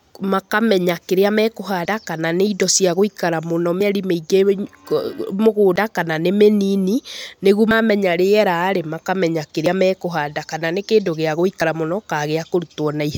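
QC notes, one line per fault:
1.85, 3.81, 5.76, 7.71, 9.66, 11.61 s: audio missing between chunks. The speech skips forward at a steady interval of just under 2 s, each time dropping about 50 ms and butting the two sides together with no gap, and a click may mark the join. This likely comes from a recorder handling 2 s chunks and losing a sliver at each handover. On a waveform, each splice shows as an abrupt jump in level with no silent stretch. On a spectrogram, a vertical seam appears where the harmonics break.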